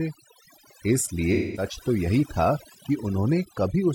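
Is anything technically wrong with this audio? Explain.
Yes, there are two faults.

Overdone noise removal runs through the whole recording. A noise reducer set too aggressively pushes individual frequency bands far down, or cuts them entirely, whenever they fall close to its noise estimate. The quieter parts of the speech fall below that threshold and are removed along with the noise. The result is a background of near silence dotted with twinkling, chirpy specks.

AAC frame loss with concealment occurs from 1.33 to 1.66 s. A run of coded frames went missing, and the sound points to roughly five lost frames. To bridge the gap, the decoder rebuilt the audio from the last good spectrum, with scrambled phase or interpolated energy. Over that stretch the speech turns into a smeared, noisy, phasey patch, and the normal audio resumes after it.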